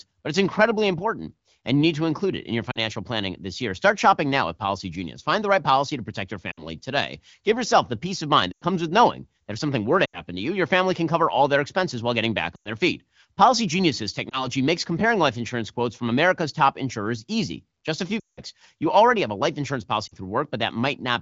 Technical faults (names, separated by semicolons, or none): lost AMR speech frames